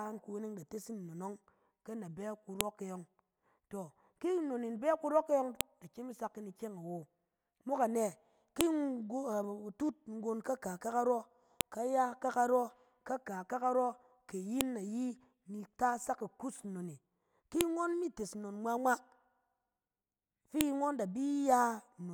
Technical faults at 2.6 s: file header played as audio

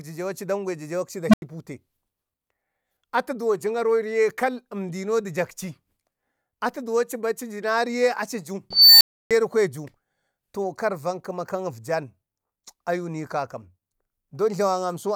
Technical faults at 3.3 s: none

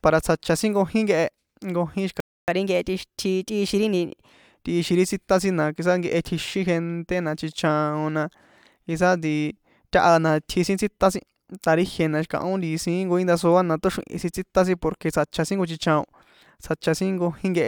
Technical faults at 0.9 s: none

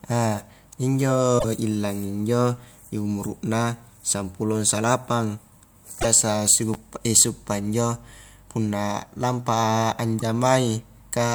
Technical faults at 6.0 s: damaged data in a compressed stream

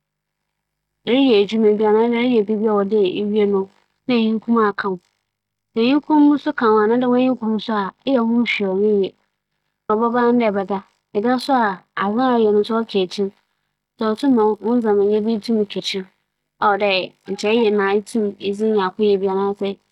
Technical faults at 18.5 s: none

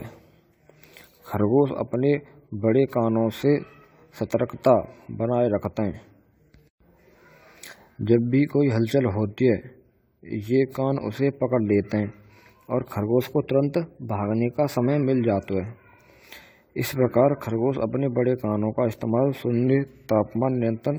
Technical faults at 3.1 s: generation loss

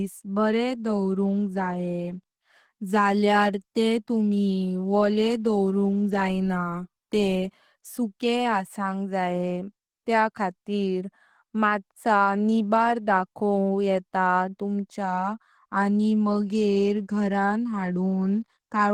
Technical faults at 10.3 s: Opus compression

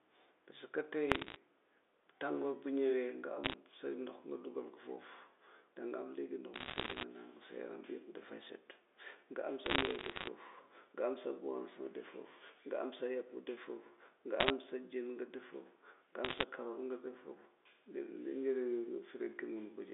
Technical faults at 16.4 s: bit errors on a digital phone line

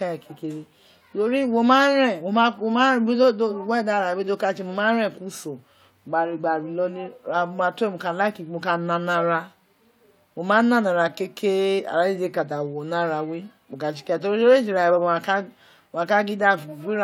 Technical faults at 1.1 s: none

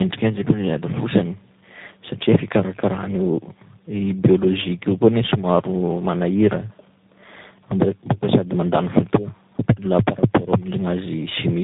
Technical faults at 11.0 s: tandem speech coding

